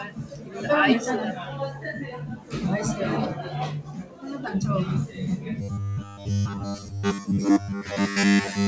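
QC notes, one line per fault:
Throughout: noise suppressor applied to music or sounds. Steady parts are read as noise and pulled down by about 10 dB, so levels pump; the waveform envelope dips between attacks.
0.04–0.6 s, 2.13–2.53 s, 3.82–4.25 s: sound cut by the noise suppressor. Held and decaying sound sinks by up to about 10 dB while onsets survive; the spectrogram shows tails fading early.
5.61–8.67 s: robotic sound from repeated short buffers. Rigid 100 Hz buzz over most of the stretch, likely from a 10 ms chunk looped while real audio is skipped. The spectrogram shows evenly spaced harmonic lines, and the waveform shows identical repeating cycles. The call path's band ends at 8 kHz.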